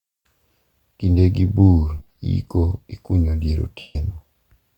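Lost LE Audio frames at 1.98–2.16 s, before "iko ikunyo dier", and 3.79–3.96 s, after "bur iko ikunyo dier", in this speech: the LC3 decoder repeats the last spectrum with random signs, leaving noisy smears.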